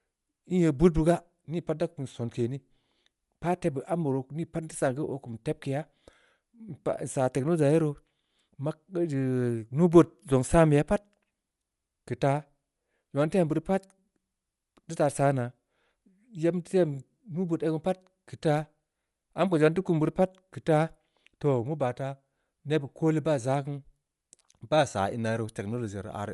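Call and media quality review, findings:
Throughout: likely Bluetooth LC3 compression, upper band zeroed and noise-filled, fitting a 48 kbps stream with 10 ms frames; speech plainly grainy, breathy, empty above 11.6 kHz.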